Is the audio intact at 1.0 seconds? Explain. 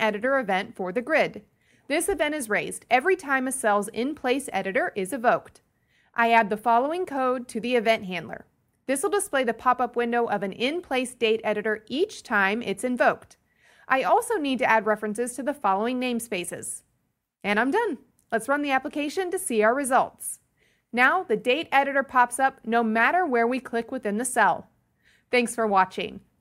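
Yes, the audio is intact at 1.0 seconds, with no fault audible at that moment.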